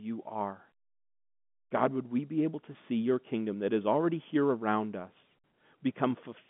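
No faults to report: the speech sits in an ordinary G.711 telephone band of 150 Hz to 3.5 kHz with nothing above 3.8 kHz, as expected for a phone line.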